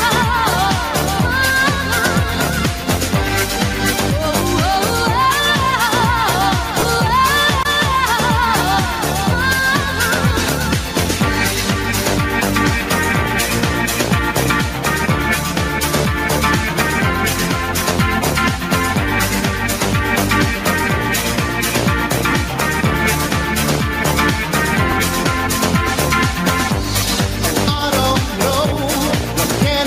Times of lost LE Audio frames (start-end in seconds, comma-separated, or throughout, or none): 6.79-6.83, 22.31, 24.91